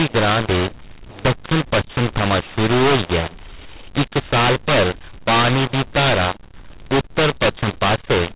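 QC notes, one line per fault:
throughout: mu-law and A-law mixed up. The speech sounds harsh and gritty, with loudness scrambled so some stretches jump out too strong while others sink, and the pauses hiss with noise instead of falling to silence. The audio was coded with G.711 mu-law but decoded as A-law. Each 8-bit code therefore lands on the wrong point of the logarithmic curve, and codes meant for near-silence come out well above zero.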